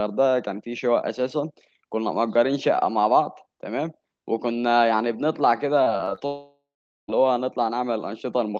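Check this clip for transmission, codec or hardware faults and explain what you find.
There are two faults, both in the back third of the speech, and they run almost straight into each other. The audio comes through a call codec that caps the top end around 8 kHz, consistent with Opus at a modest bitrate near 24 kbps.

From 5.83 to 6.22 s there's repeated packet loss with a robotic sound. Five short holes land in that stretch, the longest about 23 ms, and the receiver papers over each one by stretching the last bit of audio it had. Roughly a quarter of that span, about 90 ms in total, is that patched-in filler. So instead of a clean flow you get a choppy warble with small bits missing.

Right after, from 6.26 to 7.10 s, there's a long network dropout. About 0.82 s of audio never arrives, likely because the connection stalled outright rather than just dropping odd packets. The decoder first tries to carry the last sound forward as a fading buzz, then gives up. 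For the last 0.45 s or so it's effectively dead silence. When the audio resumes, that missing chunk is simply gone.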